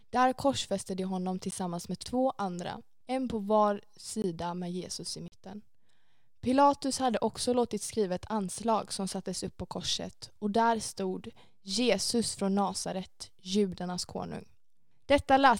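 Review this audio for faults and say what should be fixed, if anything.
Three blocks of digital silence punch through the speech: a single tick at 1.51 s (about 13 ms), then a 20 ms dropout from 4.22 to 4.24 s, and a 40 ms hole from 5.28 to 5.32 s that reads as a brief gap. The signal snaps straight to silence and back with no fade. That most likely happens when the output buffer isn't filled in time. Worth fixing by giving the audio thread more buffer headroom or priority so it never misses its deadline.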